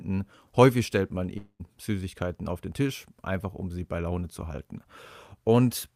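A long network dropout runs from 1.37 to 1.62 s, just after "stellt man": the sound smears into a fading buzz, then about 80 ms of silence, and about 220 ms of speech never returns, likely because packets stopped arriving and the receiver filled the gap.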